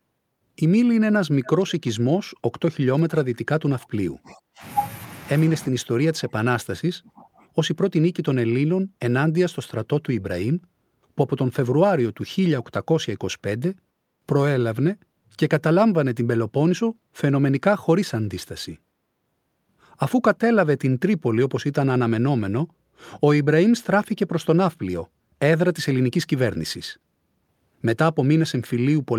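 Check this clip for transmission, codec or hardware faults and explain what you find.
Two kinds of fault are audible, both pointing to echo control on a speakerphone link.

Echo leak, from 1.44 to 1.72 s. A faint, delayed copy of the speech trails the original by about 0.38 s, sitting roughly 20 dB below it. It is brief and ghostly. The likely cause is a far end playing the call on a loudspeaker, with its echo canceller failing to remove everything the microphone caught. The leftover was sent back down the line.

Speech suppressed in double talk, from 2.94 to 4.62 s and from 5.5 to 7.49 s. The speech level dips, falling by as much as 35 dB at the deepest points. About a second and a half is affected in the first span and about two seconds in the second. The likely cause is both sides talking at once. The echo canceller could not tell its own talker from loudspeaker echo, so it turned both down.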